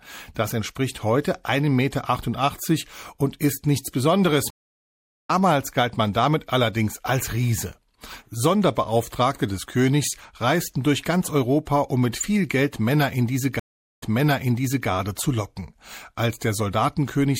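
Throughout the clip the speech has a watery, swirling quality, with dull treble and chirpy, metallic s sounds. This is plainly audible codec damage, likely from MP3 compression at a low bitrate, which fits around 64 kbps. With so few bits, the encoder cuts the high frequencies at a fixed point and zeroes weak spectral lines that flicker on and off between frames. Consonant onsets also smear.

A stream reconnect occurs at 4.50 s and runs to 5.30 s. The link drops, leaving about 0.79 s of silence, and a fresh decoder then picks up mid-stream. Playback resumes roughly 0.7 s further into the material, so that stretch of audio is skipped.

A second stream reconnect spans 13.59 s to 14.88 s. The silence is shorter, about 0.43 s. This time the server resends a burst, so the audio restarts about 0.86 s earlier and repeats material already heard.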